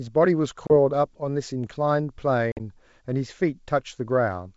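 At 0.67 to 0.71 s the speech drops into a hard-edged hole, with 30 ms of sound gone. At 2.52 to 2.60 s a longer, broken gap follows, with 60 ms missing across 80 ms and the longest run 50 ms. After each hole the speech comes back slightly distorted, then settles. This is packet loss on an ADPCM call, a few packets the first time and about seven the second. The lost audio was replaced by silence, leaving the receiver's adaptive predictor and step size out of step with the sender's until they converged again. The G.722 wideband coding around it sounds like 64 kbit/s operation.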